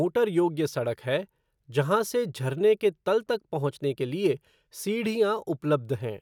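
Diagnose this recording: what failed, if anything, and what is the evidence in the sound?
Nothing failed; no stage shows any audible fault.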